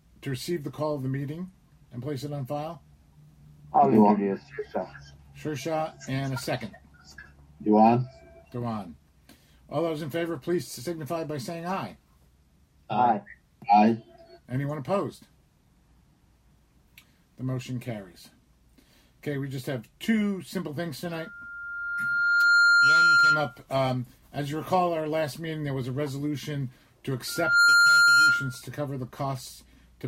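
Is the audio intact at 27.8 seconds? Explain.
No. At 27.8 s the sound is caught in a loudspeaker feedback squeal running from 27.27 to 28.62 s. The microphone picks up its own loudspeaker, and the loop gain passes one at 1.4 kHz. That tone swells within about a third of a second to a steady squeal roughly 10 dB above the programme.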